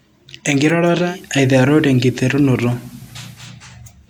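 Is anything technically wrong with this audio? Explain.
Yes. From 0.99 s to 3.48 s the speech gains a soft hiss roughly 30 dB down and shifts about 1 dB in level. This is digital radio blending to analogue FM, cross-fading over 178 ms each way.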